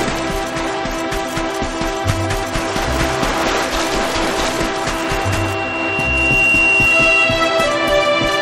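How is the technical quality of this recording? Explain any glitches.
Quality is compromised by a loudspeaker feedback squeal from 4.88 s to 7.53 s. A microphone re-amplifies its own loudspeaker until a 2.8 kHz tone runs away, swelling over roughly a second and a half to about 5 dB above the sound. Unlike steady hum, it grows by itself.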